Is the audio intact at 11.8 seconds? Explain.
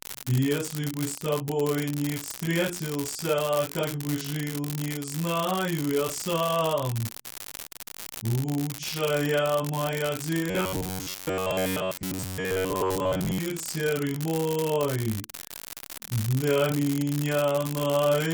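No. At 11.8 seconds the sound falls inside a stretch of robotic sound from repeated short buffers, running from 10.50 to 13.38 s. New audio is likely arriving too seldom, so playback fills the gaps by looping the last fragment, which hides most of the real material. Each loop is about 10.7 ms long, fixing a buzz at 93.8 Hz that leaves a rigid, metallic drone that only loosely tracks the underlying sound.

The unreliable data bit also affects this moment, as it does the whole clip. One data line is marginal and flips its bit in a random share of samples, and every wrong sample makes a spike of the same size. The result is a steady crackle or fizz under the buzz, and it stays audible in pauses instead of following the level of the sound.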